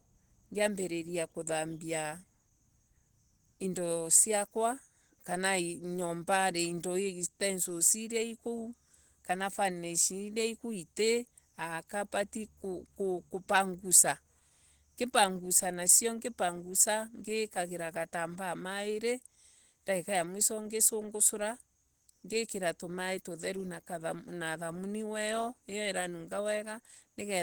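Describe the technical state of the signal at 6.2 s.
At 6.2 s, as across the whole clip, the speech sounds muffled, hoarse and grainy. This is likely Opus compression in its hybrid speech mode, fitting a low rate near 16 kbps.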